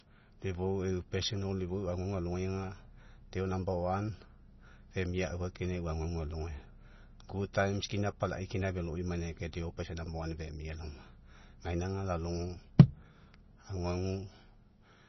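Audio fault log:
throughout: MP3 compression, likely the cause of what you're hearing. There's heavy codec damage across the speech, with nothing above 6 kHz, so the top end is simply gone. It sounds watery or swirly, and the s sounds come out with metallic chirps. That happens when the encoder runs short of bits and zeroes weak frequency lines, which then flicker on and off from frame to frame. The damage fits a very low bitrate of around 24 kbps.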